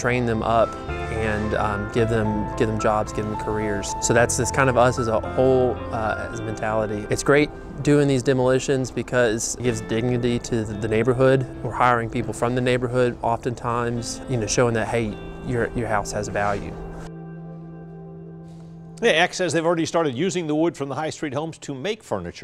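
There are no technical faults to describe in time order in this audio.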